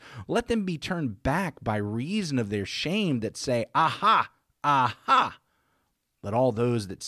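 No faults detected in the speech recording; nothing to flag.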